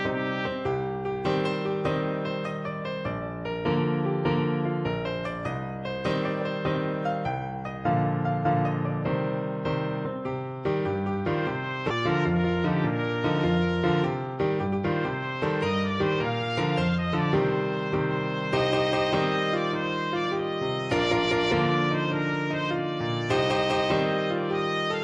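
At 11.90 s there's a skip ahead: about a second of audio just vanishes, probably dropped in transit or by an overflowing jitter buffer, and playback lands straight on the later material with essentially no gap, so the two sides butt together abruptly.

Then from 14.28 to 17.13 s you get a jitter buffer speed-up. The receiver had too much audio queued, so it kept snipping out short pitch-period chunks, around 300 ms in all. Things run at about 110% speed with the pitch unchanged, which sounds noticeably hurried.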